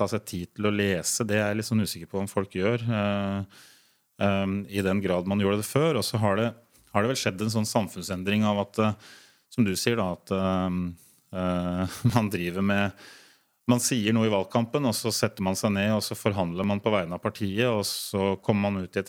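The speech jumps abruptly at 5.71, 7.29 and 12.10 s, again at 14.99 s between "noe i valgkampen og" and "setter man seg", and at 16.64 s between "og så forhandler" and "man på vegne". Each is likely a dropped buffer (overrun): the software failed to collect the incoming samples in time, so roughly 10 ms was overwritten, and the audio on either side was spliced together with no gap.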